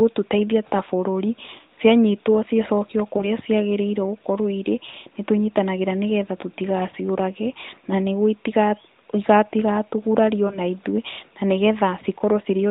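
Lost AMR speech frames occur at 3.18 to 3.26 s, at 4.90 to 4.95 s just after "gũkorwo irĩ", and at 10.48 to 10.59 s just before "ithuĩ na nĩ". Radio errors corrupted the frames. The decoder repeated its last good settings with falling gain. The single-frame gaps at 3.18 and 10.48 s sound like a brief dip or warble.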